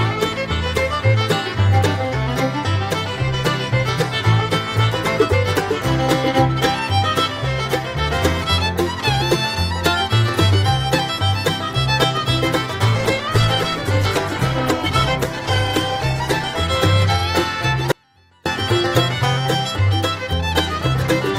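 From 12.9 s to 16.75 s a call bitrate drop takes hold: the sound turns coarse and muffled, bottoming out for about 3.8 s, which fits an encoder squeezed from around 128 kbps to roughly 15 kbps. On a spectrogram the upper band vanishes abruptly, leaving a lowered ceiling.

At 17.92 s the sound cuts out for 540 ms until 18.46 s, leaving only a faint residue some 35 dB below the signal, most likely an audio dropout to a faint residue. The waveform collapses to a thin sliver, then snaps back.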